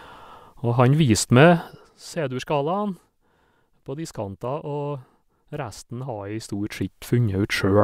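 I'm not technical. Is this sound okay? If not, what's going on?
Yes, nothing in this speech recording stood out as a problem when listening to it.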